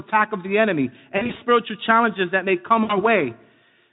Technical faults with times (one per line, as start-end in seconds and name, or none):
1.17-1.43 VoIP packet loss concealed by the speech codec
2.83-2.97 VoIP packet loss concealed by the speech codec